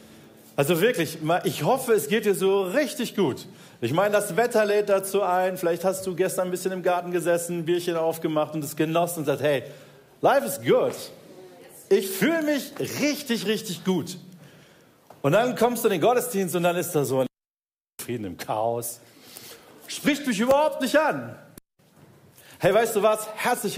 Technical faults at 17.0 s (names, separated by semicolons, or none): none